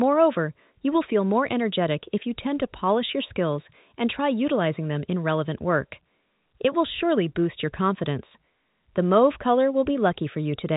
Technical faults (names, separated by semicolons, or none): none